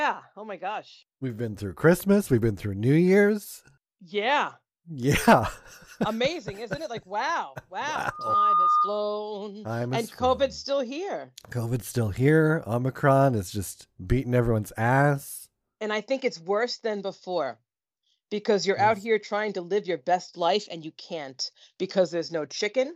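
From 8.10 to 9.03 s the microphone picks up its own loudspeaker, and at 1.2 kHz the loop gain tops one. The result is loudspeaker feedback squeal: a steady 1.2 kHz tone swells over roughly a third of a second into a squeal riding a few decibels above the speech.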